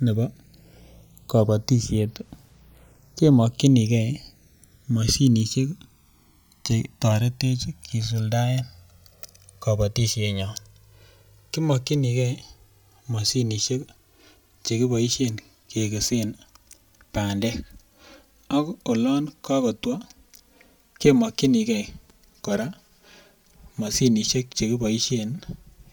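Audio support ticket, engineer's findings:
Channels drifting apart across whole speech clip. Slow flanging on mono sum as comb notches sweep. Separate device clocks, roughly 200 ppm error. Inter-channel delay grows to about 5 ms.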